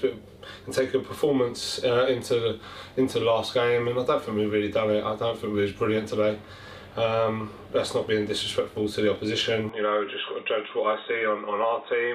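At 9.69 s the input was likely switched to a poorer device. From there the audio cuts off above 3.8 kHz, turns about 5 dB quieter and picks up faint noise.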